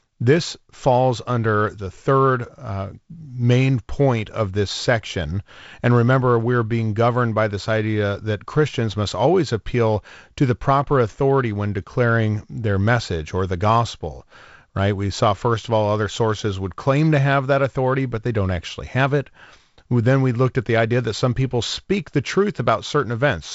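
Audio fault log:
No faults: the speech carries G.722 wideband telephone coding, with nothing above 7.7 kHz and light coding noise that fits the 48 kbit/s mode.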